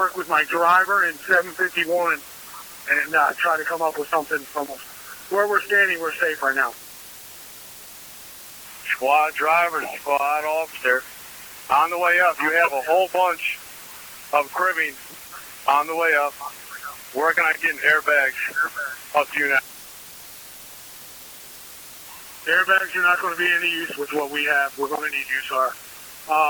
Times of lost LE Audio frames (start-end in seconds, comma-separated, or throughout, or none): 11.43